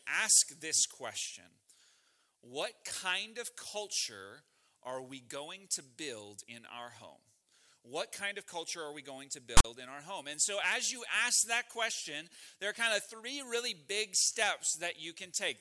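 A sudden harsh rasp with hard edges cuts in at 9.57 s and lasts about 76 ms, to 9.65 s, sitting off to one side before dropping into dead silence. This is file tags played as audio: a block of text metadata, followed by zero padding, has been decoded as though it were samples.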